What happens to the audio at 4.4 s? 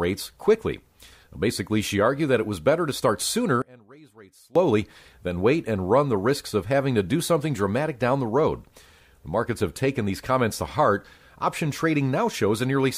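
Just after "better to start sooner", from 3.62 to 4.55 s, the speech collapses by about 26 dB to a faint residue, likely from one channel inverted cancelling the centred voice in mono. Unlike a dropout, a faint trace remains rather than silence.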